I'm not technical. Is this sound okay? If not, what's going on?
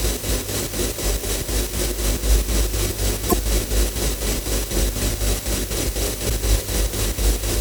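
No. There are two short glitches, at 3.28 to 3.34 s and 6.26 to 6.31 s. They come from damaged data in a compressed stream: part of the stored file was corrupted, so the player briefly misread it there.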